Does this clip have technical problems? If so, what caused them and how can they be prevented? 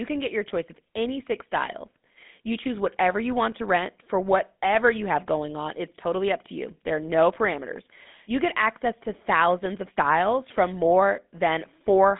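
Yes. GSM full-rate codec throughout: the speech sounds buzzy and gravelly, and nothing above about 3.8 kHz comes through, which fits a 13 kbps phone path. Avoid it by recording locally or using a wideband codec.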